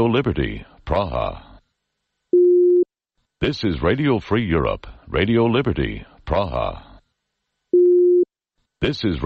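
A steady train of faint, evenly spaced ticks, clock slip clicks, runs through the audio from 0.13 s to 9.21 s, about one every 70 ms, well over a hundred in all. Each is a tiny discontinuity consistent with a single sample being dropped or repeated. The likely cause is two devices running on independent, unsynchronised clocks. A mismatch of roughly 300 ppm builds up to a whole sample at that interval, so each slip lands at that regular rate.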